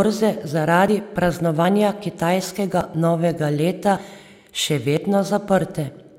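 Speech with five abrupt skips at 0.88, 1.65, 2.81, 3.97 and 4.97 s. Each is a point where the audio jumps forward with no gap, losing a few tens of milliseconds. These are likely dropped buffers (overrun): samples overwritten before being read.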